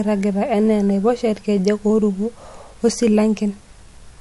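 From start to finish, the speech has nothing above about 11.3 kHz, and the top end sounds dull, with the artefacts of heavy MP3 coding. This is the pattern of low-bitrate audio saved at a high bitrate: the file was likely encoded as MP3 at around 48 kbit/s and then re-encoded at a high rate such as 320 kbit/s. The second pass cannot restore the band or detail the first discarded.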